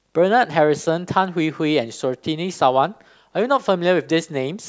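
No technical faults can be heard anywhere in the recording; the signal stays continuous and steady throughout, with nothing interrupting or altering it.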